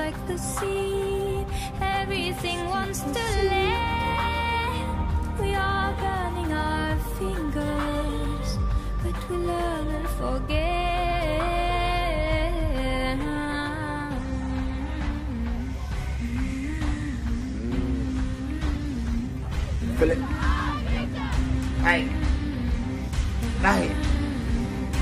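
A call bitrate drop from 18.56 to 20.27 s starves the encoder of bits, coarsening the sound and dulling its highs, consistent with a fall from about 128 kbps to about 15 kbps.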